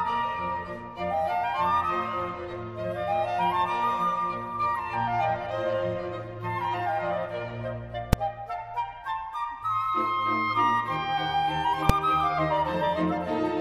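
Invalid numbers at full scale strike at 8.13 s and again at 11.89 s. Each time a calculation produces infinite or invalid values that clamp to the extreme positive or negative level. The output is pinned for roughly 2.9 ms, which fits a 128-sample processing block, so each is heard as a single sharp bang.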